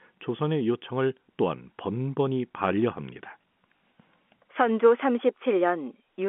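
At 3.79 s there is packet loss with the last packet repeated. About 20 ms of audio, which fits a single lost packet, was replaced by a copy of the preceding stretch. Because it is a single repeat, it produces a small blip rather than the silent gap of a plain dropout. The narrow telephone band of the G.711 line sits underneath it.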